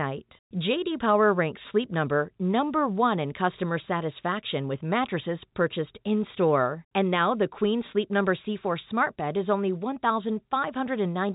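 There are no technical faults to place in time order; the speech carries the narrow G.711 telephone band, with nothing above 3.8 kHz.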